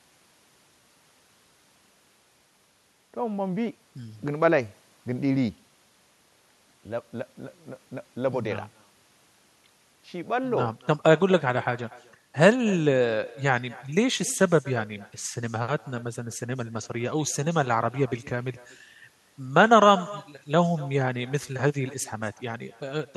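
Speech with echo with no canceller throughout: a far-end loudspeaker feeds back about a fifth of a second late at about 21 dB down, showing as faint delayed smears trailing each syllable on a spectrogram.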